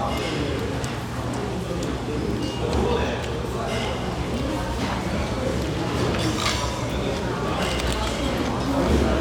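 There are no technical faults to describe in this recording of everyday sounds.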